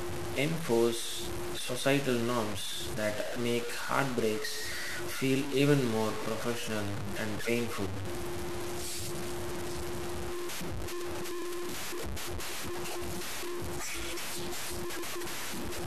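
Speech clip with low bit depth without dither running through its whole length. The sound is coarse and grainy, with the error close to the level of the signal itself, and the grit shifts with the speech, worsening as it gets quieter. Soft syllables and decays break into sputter or drop out. That points to a signal likely truncated to about 5 bits with no dither, leaving the quantisation error tied to the waveform.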